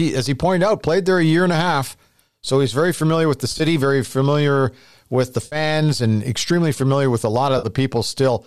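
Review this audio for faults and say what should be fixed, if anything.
AAC frame loss with concealment: compressed frames were lost in three bursts, and the decoder patched each gap from the last good spectrum. At 3.52 to 3.61 s, about 50 ms went missing in short runs over 80 ms. At 5.46 to 5.56 s the loss was about 60 ms, and at 7.58 to 7.67 s about 50 ms. Each gap is heard as a brief smeared, noisy, phasey patch. The gap lengths fit the roughly 10 ms frames of low-delay AAC, which is likely the codec in use. To prevent it, add forward error correction or redundancy and a deeper jitter buffer on the transport path.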